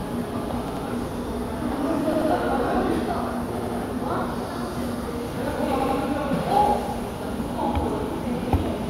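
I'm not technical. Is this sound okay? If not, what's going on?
No, there are four short stutters, caused by a fault called repeated buffer. At 0.68 to 0.85 s, 2.13 to 2.30 s, 3.58 to 3.76 s and 5.80 to 5.97 s, a tiny slice of sound, under a tenth of a second, plays three times in a row with a hard jump at each restart. The playback device ran out of fresh audio and replayed what it already had. Unlike a dropout, nothing falls silent and no sound goes missing.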